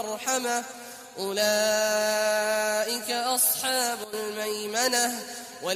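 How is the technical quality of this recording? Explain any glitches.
One glitch. From 4.04 to 4.13 s, a sudden gain jump drops sound and background together by about 12 dB, likely from a digital gain change applied without a ramp.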